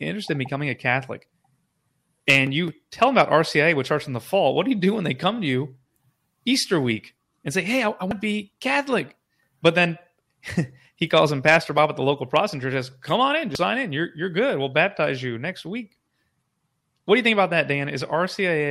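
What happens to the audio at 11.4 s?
The loud parts turn crackly there, from 11.17 to 11.85 s, just before "at the local". This is hard clipping: the speech is driven about 4 dB past what the stage can pass, so its peaks are sliced flat, adding bright upper harmonics.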